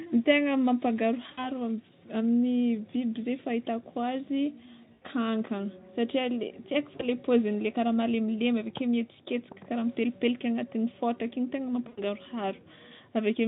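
Four dropouts of VoIP packet loss concealed by the speech codec occur at 1.32–1.49 s, 4.93–5.05 s, 6.96–7.05 s and 11.87–12.02 s, with 60, 80, 40 and 100 ms of audio missing. The decoder extrapolates from its last pitch and filter, so the speech stretches into a buzzy tone or coloured noise that fades and stays weak briefly after each gap. On a spectrogram, the harmonics run flat and smeared, and the waveform envelope decays smoothly where the gap is.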